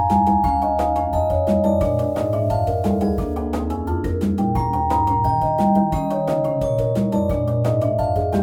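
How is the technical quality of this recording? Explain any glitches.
One glitch stands out. From 1.84 to 3.34 s a steady, even hiss rises, sitting roughly 40 dB below the signal, with no harshness or distortion. This is low bit depth with dither. The resolution drops to what fits about 9 bits, and dither randomises the rounding error into flat white noise instead of grit.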